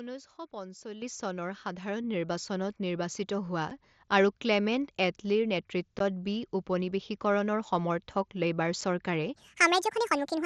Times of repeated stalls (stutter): none

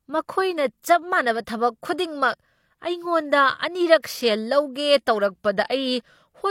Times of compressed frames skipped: none

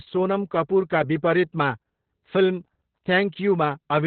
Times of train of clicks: none

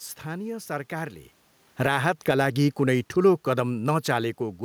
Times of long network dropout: none

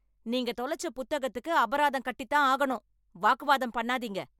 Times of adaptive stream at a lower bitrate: none

